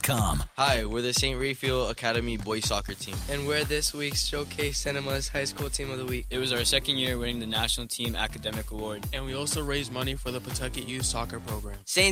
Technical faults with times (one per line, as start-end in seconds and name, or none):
none